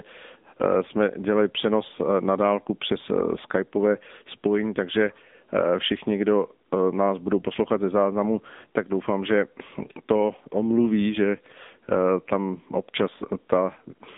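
From start to finish the speech runs through an AMR narrowband mobile codec, and it's plainly audible: nothing above 3.8 kHz, a thin 200 Hz to 3.6 kHz phone band, and a buzzy, synthetic vocal-tract rebuild that fits a mode around 7.95 kbps.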